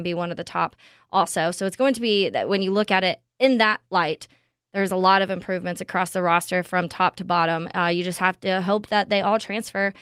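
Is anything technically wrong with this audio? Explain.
No, there is nothing technically wrong with this audio. No faults can be heard anywhere in the speech.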